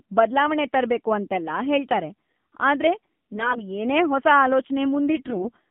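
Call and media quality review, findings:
AMR narrowband mobile codec, full duration: speech band-limited to about 150 Hz to 3.5 kHz, nothing above 4 kHz. Plainly audible buzzy, synthetic timbre from the pulse-excited vocal-tract model. The degree of coarseness fits a low AMR-NB mode around 7.4 kbps.

AMR bit errors, 3.32 to 3.67 s, after "ತರ್ಬೇಕು ಅಂತೆಲ್ಲ ಹೇಳ್ತಾರೆ ಆದ್ರೆ", before "ಏನೇ ಹೊಸ": hoarse, scratchy, gargly voice with pitch and level held. Weak-link flips in unprotected bits misplace excitation pulses and skew gain and spectrum values. Second burst at 5.07 to 5.51 s is harsher, consistent with a roughly doubled error rate.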